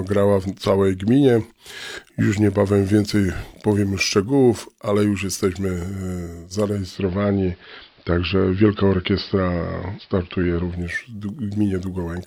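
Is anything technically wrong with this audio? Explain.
Yes. From 6.67 s to 11.04 s there is digital radio blending to analogue. The receiver lost its digital stream and cross-faded to the AM broadcast of the same station, then back. Each blend takes about 0.37 s. The level shifts by about 3 dB. A faint hiss sits roughly 40 dB below the signal.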